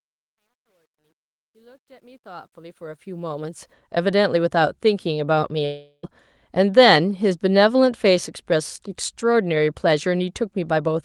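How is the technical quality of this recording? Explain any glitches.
Two clear faults affect the recording: gritty truncation distortion across the opening fade-in, and a gap mid-clip where the audio breaks off and resumes with material missing.

From 0.0 to 3.73 s the speech fades in, and throughout that stretch there is truncation distortion on the fade, worst from 0.0 to 2.46 s. The gain stage appears to keep only about 11 bits with no dither, so at low levels the waveform collapses into a few coarse steps. The result is a harsh, gritty texture until the level rises high enough to mask it.

At 5.65 s the audio cuts out until 6.05 s, most likely a long network dropout. For about 376 ms the receiver extends the last sound as a fading buzz or hiss, ending in about 50 ms of near-silence. About 380 ms of the original audio never plays, so when the sound returns at 6.05 s it resumes further on with that portion missing.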